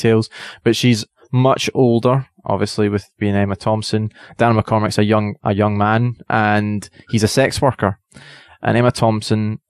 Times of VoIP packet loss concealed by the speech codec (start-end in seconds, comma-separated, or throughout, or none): none